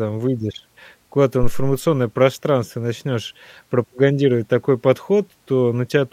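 A speech clip with a phantom power thump from 1.43 s to 1.85 s, just before "пространство начнёшь пропагандировать такой". A supply was switched on or off on the live input, and its voltage step passed through the coupling capacitors as a deep thump peaking at about -6 dBFS and decaying within roughly 94 ms. The waveform shows a large one-sided excursion that relaxes back toward zero, and the spectrogram shows a short burst of energy confined to the lowest frequencies.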